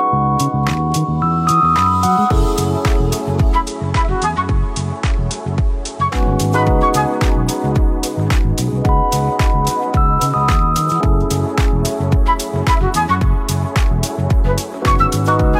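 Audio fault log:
3.56–6.23 s, digital radio blending to analogue: the receiver lost the digital stream and cross-faded over about 146 ms to the station's FM feed, so the level dips about 2 dB, and faint hiss sits around 40 dB down until it swaps back.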